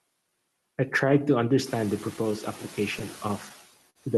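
A speech clip carried over a call path, with four faults. Noise suppressor artifacts run through the whole clip. The suppressor pushes the steady background down by about 17 dB, frame by frame. So the noise sinks in the gaps and comes back under the speech. The background rises by about 15 dB at around 1.5 s and then sits about 19 dB below the speech. Against that louder noise, the leftover noise can warble, and the speech can turn thin and watery. Clock drift between sender and receiver also lasts the whole clip. The sender's clock runs slower, by roughly 4 percent. The jitter buffer keeps draining, so the receiver must make up the shortfall. That is heard as repeated timing corrections from 0.30 to 2.33 s. Here the playback runs at about 97 percent speed. Short pieces are repeated at uneven intervals, all adding time, roughly 70 ms in total. Each edit is tiny. Then comes a short stall from a late packet, from 3.90 to 3.98 s. 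The buffer ran dry, and the receiver held the last sound for 54 ms until the data arrived. Nothing is lost. Playback resumes where it stopped, but the sound hangs a moment too long, with a small buzz or dip. The delay also grows by 54 ms there. The top end stops near 12 kHz, which fits an Opus call codec at a moderate bitrate.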